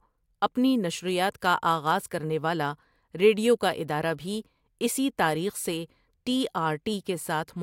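Speech recording with no audible technical faults anywhere.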